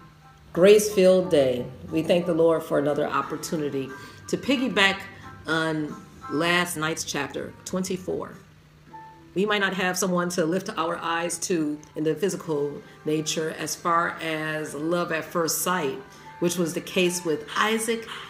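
A time-stretched section runs from 6.57 to 12.33 s, where the pace jumps to 1.45 times normal while pitch holds steady. Software likely compressed this stretch to fit a shorter length by dropping short slices, so the audio turns rushed until it abruptly resumes normal speed.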